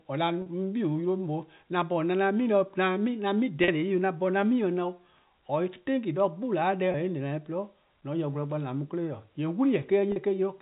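Packet loss with pitch repetition shows up at 0.42–0.46, 3.64–3.68, 6.92–6.94 and 10.12–10.16 s. Each time the receiver loops the last pitch period across a 40 ms gap (20 ms at 6.92 s), so the speech briefly hangs on a slightly buzzy, held tone.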